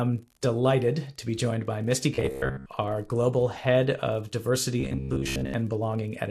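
From the start to the end of the speech, an unreliable data bit adds a steady crackle. One bit of each sample is flipping at random, so every error is a spike of identical size. Unlike codec noise, which rises and falls with the signal, this fizz carries straight through the pauses between phrases at the same density.

Also present throughout is a dull, gurgling, granular quality, most likely from MP2 compression at a low rate, consistent with around 80 kbps. With too few bits to share among its 32 sub-bands, the encoder drops the upper bands and coarsely quantises the rest, so the treble is missing and bands flicker in and out. This damage tracks the speech and fades in silence, which separates it from the bit-error crackle.

From 2.15 to 2.66 s, and again from 4.80 to 5.54 s, the speech turns into a rigid metallic buzz at 66.7 Hz. This is robotic sound from repeated short buffers. The repeat rate matches a 15 ms block being replayed, which fits audio arriving too seldom. 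In each stretch most of the real audio is skipped and filled with copies. Unlike the MP2 gurgle, the buzz holds one fixed pitch regardless of the voice, while still loosely following the phrasing.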